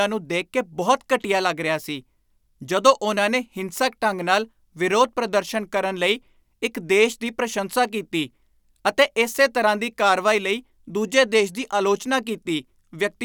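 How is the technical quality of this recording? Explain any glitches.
No technical glitches can be heard anywhere in the recording, so there is nothing to explain.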